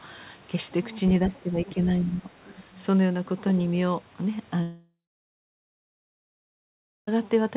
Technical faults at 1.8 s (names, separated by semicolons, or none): speech suppressed in double talk